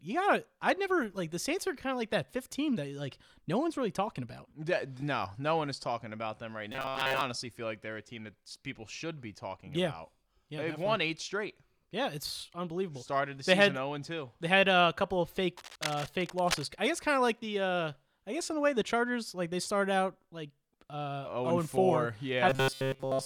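From 6.72 to 7.21 s, right after "talking about them right" and before "feel like they're a", the speech goes robotic, a stiff metallic buzz at 133 Hz. That's likely repeated short buffers, about 7.5 ms looped while most of the real audio gets skipped. It comes back from 22.49 s to the end, where everything is repeats.

Between 15.57 and 16.66 s, after "a couple of fake" and before "I guess kind of", there's cable scratch noise, rough uneven rustling roughly 10 dB under the speech, probably a worn connector or cable shifting.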